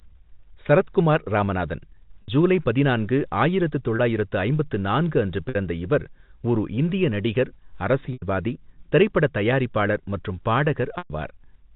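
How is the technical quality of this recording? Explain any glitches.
Five short packet-loss gaps, concealed by pitch repetition, interrupt the speech: at 2.22 s (60 ms, between "சரத்குமார் ராமநாதன்" and "ஜூலை பதினான்கு ஆயிரத்து"), at 3.96 s (30 ms, just before "ஐம்பத்து நான்கு அன்று"), at 5.49 s (60 ms), at 8.13 s (90 ms) and at 10.98 s (120 ms, right after "தயாரிப்பாளர் மற்றும்"). The gap lengths step in multiples of 30 ms, which points to 30 ms packets. At each gap the receiver keeps looping the last pitch period and fades it out. The shorter gaps sound like a briefly held, buzzy note, and the 90 and 120 ms gaps fade toward silence before the speech cross-fades back in. A plain dropout would leave a hard hole or click, but here the held buzz fills the gap. The telephone-band G.711 coding underneath is working as expected.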